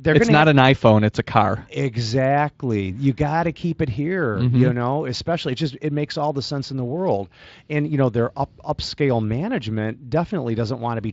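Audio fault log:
No faults are heard in this speech. The Speex coding comes through as only a light colouring of the voice, which fits a fairly high quality setting.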